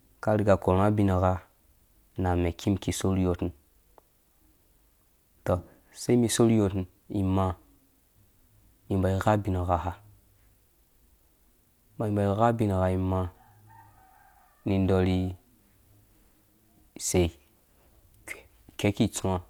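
A speech recording in which no technical fault can be heard anywhere in the signal.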